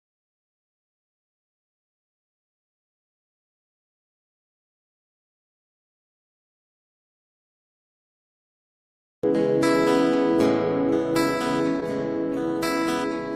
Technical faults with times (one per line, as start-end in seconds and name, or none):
9.15-9.24 burst of packet loss
11.80-11.83 short concealed packet loss